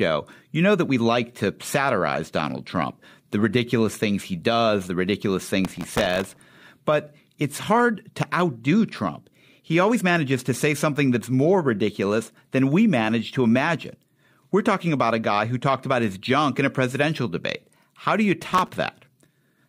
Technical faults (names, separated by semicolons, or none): processor overload crackle